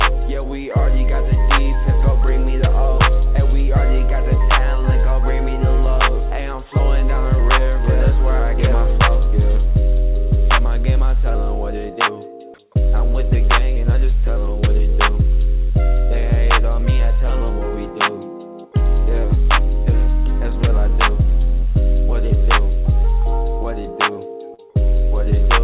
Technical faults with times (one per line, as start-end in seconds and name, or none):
24.54-24.60 short concealed packet loss